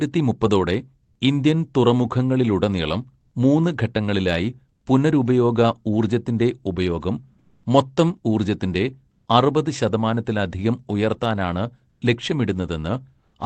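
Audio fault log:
1.03–1.15 s, 7.39–7.63 s, 9.13–9.25 s: comfort noise in place of the background. Detailed room tone drops to flat synthetic hiss, about 12 dB quieter in the middle gap, likely from discontinuous transmission.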